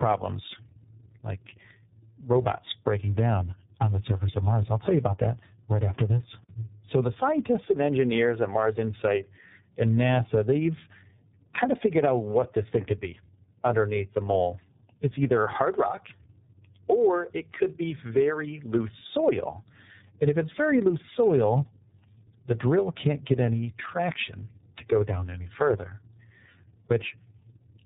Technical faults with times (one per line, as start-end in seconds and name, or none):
0.00-27.86 tandem speech coding